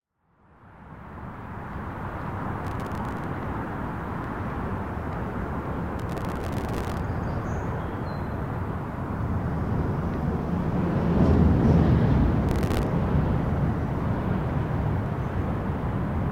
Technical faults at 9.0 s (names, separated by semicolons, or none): none